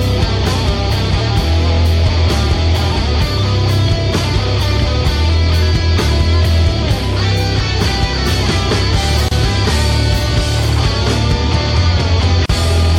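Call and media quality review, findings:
Gap at a join of encoded pieces, two instances: 9.28–9.31 s (about 29 ms) and 12.46–12.49 s (about 37 ms). Short gaps cut into continuous sound, edges smeared by the codec. Probable component: segment concatenation after separate encoder runs, with start-up delay and last-frame padding left untrimmed. Unlike a packet-loss dropout, nothing is skipped. Sound resumes exactly where it stopped, with a gap rather than concealment noise or repeated material.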